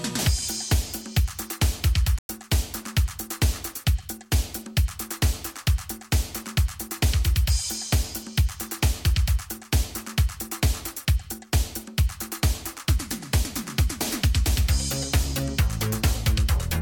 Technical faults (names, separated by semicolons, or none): AAC frame loss with muting